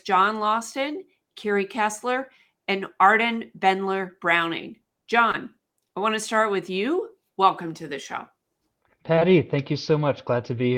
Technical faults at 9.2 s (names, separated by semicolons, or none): short concealed packet loss